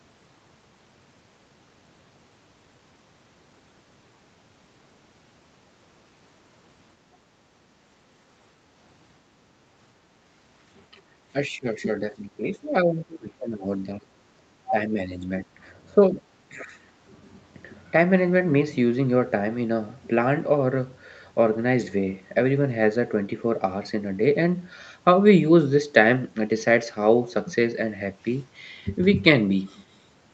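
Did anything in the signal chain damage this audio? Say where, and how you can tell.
Yes. The damage happens in the call processing stage, at the echo canceller. From 10.9 to 11.03 s, while the loudspeaker was active, the canceller pulled the microphone down by about 8 dB, so the room background briefly dips and then comes back. That short notch is background gated by the echo canceller: its suppressor clamps the microphone path while it thinks echo is present, then releases.

The same stage produces a second, more serious fault from 11.33 to 16.76 s. The talker's speech is repeatedly pushed down at 11.33 to 14.08 s, 14.37 to 14.48 s, 14.69 to 15.47 s, 15.89 to 16.24 s and 16.49 to 16.76 s. The deepest cuts are around 20 dB and the shallower ones about half that, so the voice sinks and thins in pieces. This is likely speech suppressed in double talk: with both ends talking at once, the canceller could not separate local speech from loudspeaker echo and attenuated everything.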